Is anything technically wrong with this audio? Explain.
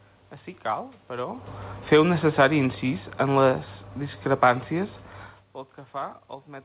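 Yes. Automatic gain falling, from 1.78 to 3.66 s: the gain control judged the input too loud or its background noise too strong and eased its gain down by about 5 dB, so speech and background sink together.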